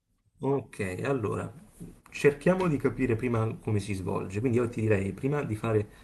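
No faults are audible in the speech, with the top end rolling off around 12 kHz as expected from the call codec's bandwidth.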